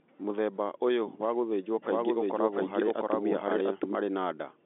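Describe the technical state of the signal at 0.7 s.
At 0.7 s the signal is intact, with the speech carried cleanly through ordinary G.711 telephone coding, band-limited to roughly 250 Hz to 3.6 kHz and with nothing audible above about 3.8 kHz.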